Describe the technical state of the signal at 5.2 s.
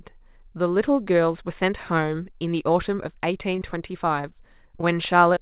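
At 5.2 s the signal falls within a run of scattered short gaps from 3.56 to 5.39 s: about seven brief packet losses, each around 20 ms, patched by extending the preceding sound. The result is ticks and smears over band-limited speech ending at 4 kHz.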